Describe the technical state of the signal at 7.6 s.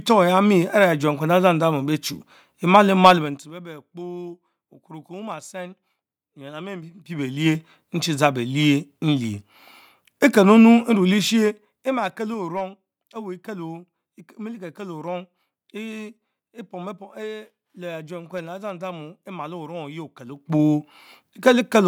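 At 7.6 s you're right at the tail end of some zipper noise that runs from 6.78 to 7.62 s. The gain on the speech is being moved in hard 2 dB jumps, about ten a second, with no smoothing between them, for a total change of around 20 dB. Each jump leaves a tiny click, so what you hear is a ticking, zippery texture riding on the voice until the level stops moving just after 7.6 s.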